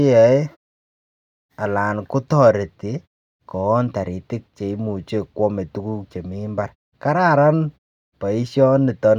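Nothing goes wrong in this speech clip, and the quiet stretches between phrases simply settle to silence before the sound comes back in time for what follows.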